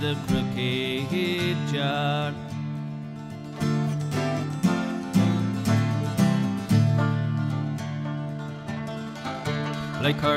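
From 8.23 s to the end, the audio plays about 1.4 times faster in a time-stretched section, likely from software squeezing it to fit a length by dropping short pieces. It sounds rushed, yet pitch stays put, unlike a plain speed-up, which would raise it.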